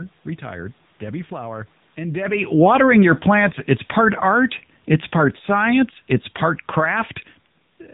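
Throughout, the speech carries the AMR narrowband mobile codec: nothing above 3.8 kHz survives, and the plainly audible buzzy, synthetic quality points to a low AMR-NB mode near 7.95 kbps. Unlike a simple low-pass filter, it rebuilds the speech from a pitch model and sparse pulses.

From 2.64 s to 7.22 s the automatic gain falls by about 6 dB, as the gain control turns its gain down over several seconds. The room noise sinks along with the speech. The talker's own movements, around 2 s and 7 s, change only the voice level.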